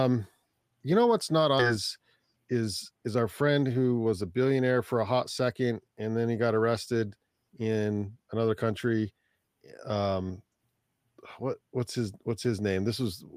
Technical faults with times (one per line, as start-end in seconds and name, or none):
1.59-1.61 skip ahead
1.69-4.22 jitter buffer speed-up